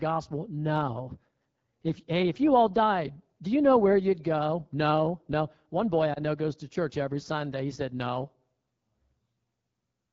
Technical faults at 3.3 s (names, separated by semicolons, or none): AMR wideband (HD Voice) codec